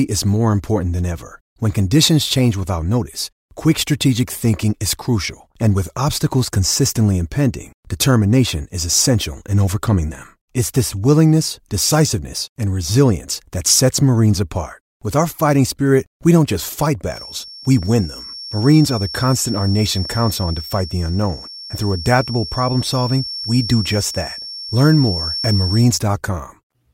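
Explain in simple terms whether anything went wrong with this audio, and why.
From 17.04 s to 25.95 s, just after "we don't just fight", a feedback whistle sits quietly behind the speech. It is one thin, steady tone near 5.4 kHz that swells and fades slowly. The likely cause is a loudspeaker leaking back into the microphone, nearly feeding back.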